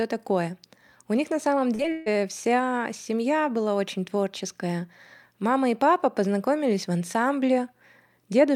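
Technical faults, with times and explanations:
1.75–1.81 s and 1.83–1.86 s, short concealed packet loss: just after "них на самом", about 40 ms and then 20 ms of audio failed to arrive, and the receiver extended the preceding sound to fill each gap, heard as quick smears. On a spectrogram, the spectrum briefly freezes into flat, repeated patterns with soft edges where it blends back.
1.92–2.08 s, burst of packet loss: about 140 ms in a row went missing, and the receiver stretched the last sound across the whole gap while turning it down, producing a fading held sound rather than silence. It resumes at "вся семья была очень" with the intervening audio gone. On a spectrogram this shows as a block of unchanging, fading stripes. On the waveform it is a repetitive, shrinking stretch with no silent dip.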